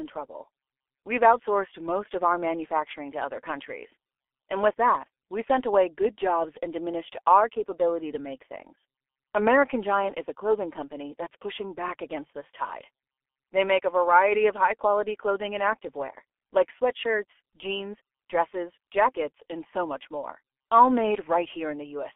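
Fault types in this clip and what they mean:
G.723.1 codec: The speech passes through a low-rate telephony codec at 6.3 kbit/s, with heavy damage. It sounds muffled and hoarse, and consonants blur. Nothing above about 3.4 kHz survives.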